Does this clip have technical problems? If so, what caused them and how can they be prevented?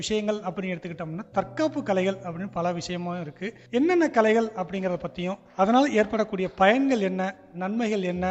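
No, nothing in this recording registers as a technical fault, so there is no cause to trace and nothing to prevent.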